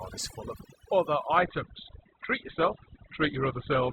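A short speech recording carries overdone noise removal from start to finish. The suppressor clamps individual frequency bands whenever they sit near its noise estimate, so the pauses fall to near silence sprinkled with twinkling specks, and the softer parts of the voice are gated away. On a spectrogram the background appears as a dark field dotted with isolated bright pixels, and the speech harmonics look patchy with holes punched out of them. From 1.38 s, right after "full of other", playback switches without a gap to an adaptive stream at a lower bitrate and stays there to the end. Everything above 4.2 kHz vanishes at once, so the sound turns dull, with more codec smearing. The drop in quality points to a stream falling from around 64 kbit/s Opus to around 12 kbit/s. A spectrogram shows a sharp horizontal ceiling at 4.2 kHz beginning at that moment, while the waveform carries on unbroken.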